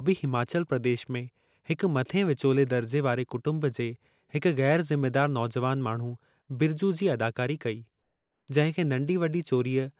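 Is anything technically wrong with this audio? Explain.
Yes. From 8.02 to 8.48 s, the sending side likely stopped transmitting during the pause under discontinuous transmission, leaving the receiver to generate comfort noise in place of the background for about 460 ms. The real background, roughly 54 dB below the loudest speech, gives way to a smooth, detail-free hiss about 4 dB quieter, so the pause sounds flattened and slightly sunken until speech resumes with "जंहिं खे". Throughout, the call codec path passes nothing above 4 kHz.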